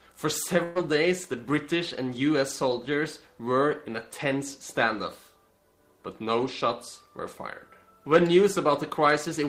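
A burst of packet loss at 0.63–0.78 s drops 120 ms; the receiver stretches the last sound, fading it, then resumes with that stretch missing.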